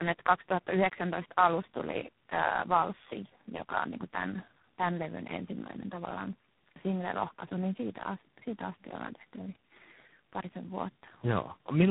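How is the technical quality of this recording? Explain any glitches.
Quality is poor throughout because of tandem speech coding. The roughness fits several coders in a row, probably four, such as AMR-NB, CVSD and G.726. Each re-encodes the previous coder's damage, leaving speech gritty, muffled and warbly. A spectrogram shows smeared, unstable formants and nothing above 3.8 kHz.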